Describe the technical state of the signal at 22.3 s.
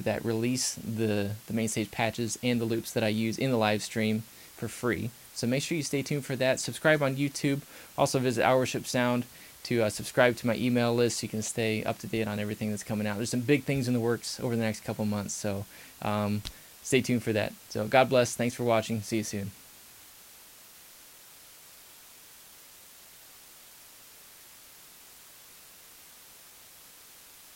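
At 22.3 s the signal shows low bit depth with dither, a condition that runs through the whole clip rather than starting or stopping near this point. The audio sounds as if it has been reduced to 8 bits, with dither added before rounding, so the quantisation error is spread into a steady, broadband white hiss instead of tracking the signal as distortion. That hiss sits only around 20 dB below the program level, constant and even, with no crunch or grit.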